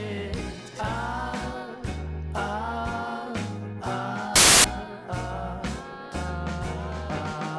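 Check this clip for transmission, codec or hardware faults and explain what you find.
One fault is present. From 4.36 to 4.64 s, file tags are played as audio: an embedded cover picture, stored as compressed data, is read as sample values. Its near-random bytes produce about 0.29 s of very loud white noise, a hard-edged burst of static.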